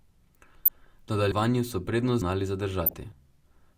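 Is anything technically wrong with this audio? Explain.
Yes. There are two kinds of fault in this speech clip.

DAB burbling occurs from 0.65 to 0.87 s and again from 2.84 to 2.94 s. Weak reception lets bit errors, at a rate of a fraction of a percent, slip past the error correction into the MP2 data. Corrupted samples put short blips of noise into individual sub-bands, and corrupted scale factors make sub-bands jump in level for up to a frame. Over the speech this is heard as short blips of noise. The first stretch is longer and more disturbed than the second.

Audio missing between chunks occurs at 1.32 s and at 2.22 s. At each point the speech jumps forward abruptly, as though about a tenth of a second had been cut out, and the two sides are butted together with no silence between them. This is likely a recorder or processor handling the audio in chunks of about a second and dropping a short piece at each hand-over, which leaves a skip.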